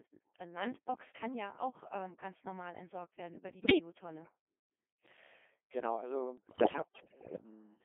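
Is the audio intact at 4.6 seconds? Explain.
No. At 4.6 seconds, as across the whole clip, the speech has passed through a Codec 2 vocoder. The original waveform is gone: only pitch, voicing, energy and a coarse spectral envelope were kept, and the decoder rebuilt the voice from sine waves. The result is heavily damaged, robotic, buzzy speech confined to roughly 200 Hz to 3.5 kHz. The degree of smearing fits a low rate around 2.4 kbit/s.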